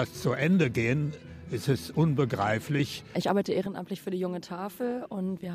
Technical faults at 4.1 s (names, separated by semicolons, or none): sudden gain jump